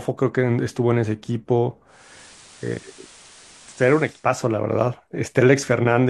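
At 1.86 s the speech drops about 2 dB and a steady hiss rises roughly 25 dB beneath it. The change fades in over about 345 ms and reverses at 4.32 s. This is digital radio blending to analogue: the hybrid receiver lost its digital stream and cross-faded to the station's FM broadcast, whose narrower bandwidth and noise floor replace the cleaner digital signal until reception recovers.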